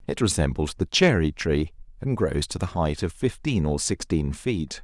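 No technical faults can be heard in this recording.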